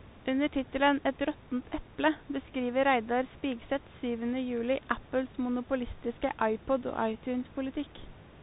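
From start to finish the speech runs through a Bluetooth CVSD headset codec, and the damage is plainly audible. Everything is squeezed below 4 kHz, so it sounds boxy and phone-like. CVSD sends just one bit per sample saying up or down, with an adapting step size, which fits a 64 kbps CVSD link. Loud, bright moments outrun that step and distort, s sounds come out scratchy, and a grainy hiss sits under the speech, on top of room noise about 22 dB down.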